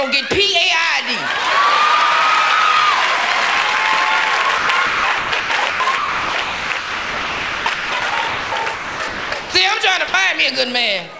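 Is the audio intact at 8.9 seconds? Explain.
No. At 8.9 s the sound falls inside choppy stretch from 4.58 to 9.54 s, chopped by the voice detector. Quiet portions drop out, about 3.2 s in total, with synthetic comfort noise filling the gaps. The sender's voice detector likely toggled transmission repeatedly.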